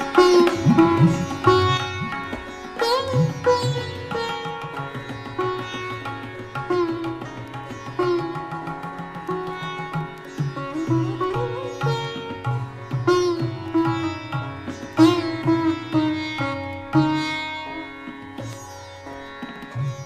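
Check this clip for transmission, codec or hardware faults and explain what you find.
One fault is present: one channel drops out. From 1.77 s to the end, the level falls abruptly by about 6 dB. One stereo channel has likely gone silent, so the mono sum keeps only half the shared signal. Anything unique to that channel vanishes.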